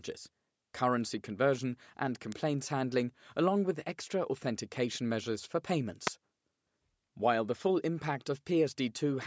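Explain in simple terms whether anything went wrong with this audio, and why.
Something nearby, likely a switch, motor or static discharge, sent a tiny burst of electricity into the audio line: an electrical switching spike. You hear it as a sharp snap laid over the speech, once at 2.32 seconds and again at 6.07 seconds.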